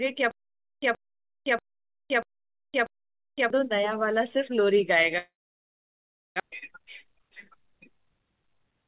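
From 0.31 to 3.50 s there is a stutter with silent gaps. A 125 ms fragment repeats five times, once every 638 ms. Each burst is followed by 513 ms of digital silence. The likely cause is a stalled player or stream that replays its last fragment on each retry. The audio meant for that span is gone.

At 5.18 s a long network dropout begins and lasts until 6.42 s. The last sound is stretched into a fading buzz, and then about one second of silence follows. The likely cause is audio that never arrived. When the sound returns, the lost part is simply skipped.

From 6.50 to 8.22 s there is a jitter buffer speed-up. The receiver trims short pitch-period slices again and again to shed roughly a fifth of a second of built-up delay. The speech runs at 110 percent speed with unchanged pitch and sounds hurried. All of this passes through a call path with nothing above 4 kHz, which fits G.711 A-law.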